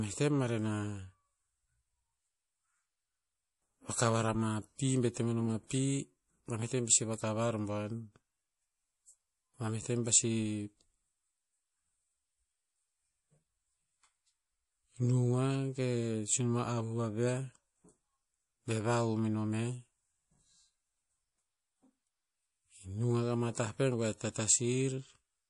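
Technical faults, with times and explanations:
Throughout, MP3 compression: treble stops at 11.4 kHz and s sounds turn watery, likely a bit-starved encoder, consistent with about 48 kbps, dropping weak lines between frames.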